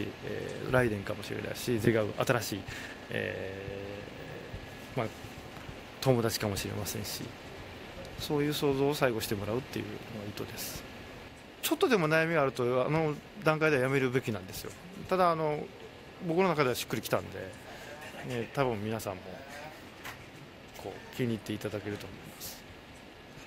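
The audio has a skip ahead at 1.85 s: about 0.7 s of audio is missing, and playback jumps straight to later material that was already waiting, with no filled gap. On a waveform the two sides join almost directly at that point, with no silent section, and a spectrogram shows an abrupt vertical seam where the spectral pattern changes instantly. This happens when a stretch is dropped in transit or discarded by an overflowing jitter buffer. A jitter buffer speed-up follows from 1.99 to 3.09 s at 116% speed, removing about 0.2 s, and again from 3.51 to 4.82 s at 113%, removing about 0.15 s. Both stretches sound hurried while pitch is unchanged. The buffer was holding more than its target and trimmed short pitch-period pieces repeatedly to cut delay. A spectrogram keeps harmonics at the same frequencies but packs events closer in time, and the waveform shows slightly compressed, repeatedly spliced cycles.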